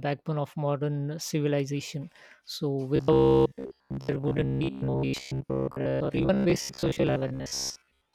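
From 2.96 s to 8.13 s the speech becomes a rigid metallic buzz near 66.7 Hz: robotic sound from repeated short buffers, likely roughly 15 ms segments looped for most of that stretch.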